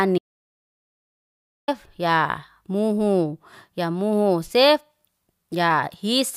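At 0.18 s the speech drops out to dead silence, with not even room tone, until 1.68 s, when it comes back in mid-flow right before "ya muhu ya muhu". That's an audio dropout to silence, about 1.5 s gone, likely a lost input link with silence written in its place.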